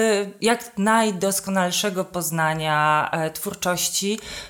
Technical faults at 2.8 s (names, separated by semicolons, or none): none